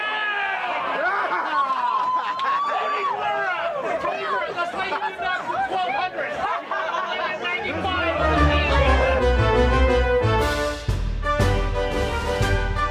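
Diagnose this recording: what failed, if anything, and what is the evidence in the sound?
Nothing in the recording points to a failure at any stage of the chain. Listening through, no event stands out that would indicate a problem in the wiring, conversion, buffering, processing, transmission, storage or playback.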